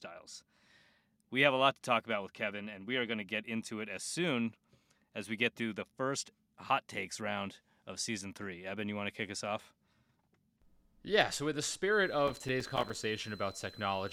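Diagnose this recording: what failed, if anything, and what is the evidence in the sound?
A thin, steady whistle sits high above the speech from 11.92 s, just after "so with the", and runs to the end of the clip. It holds between about 4.05 and 4.10 kHz, roughly 20 dB below the speech. This is a switching supply whistle, an analogue-stage fault: a switching power supply has dropped into an audible burst mode or is beating against another supply, and that ripple is leaking into the signal path.

From 12.27 s to 12.95 s a gritty, tearing crackle rides over the speech. It is made of many tiny dropouts with hard edges, each a short gap of silence, and they stop once the burst ends. This is processor overload crackle at the driver or buffer stage. The processor fell behind and kept missing its audio deadlines, and each empty buffer was played out as silence. The length of the gaps points to buffers of around 5 ms, with something like twenty missed across the burst.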